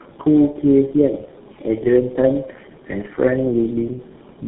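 Tandem speech coding runs throughout: three speech codecs in series, each recoding the previous one's damaged output, leave the speech rough, warbly and muffled, with nothing above 3.8 kHz.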